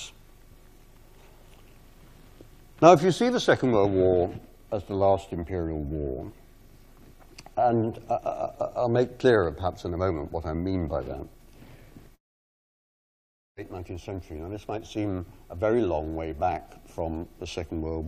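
At 12.15 s the audio breaks into a long network dropout, likely from lost packets: a brief fading buzz, then about 1.4 s of silence until 13.59 s. A spectrogram shows a smeared tail, then a blank gap; the waveform flatlines before resuming.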